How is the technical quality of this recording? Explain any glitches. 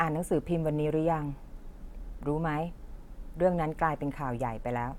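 No technical glitches turn up anywhere in this speech recording. There is nothing to explain, as no dropout, break or other disturbance interrupts the audio at any point.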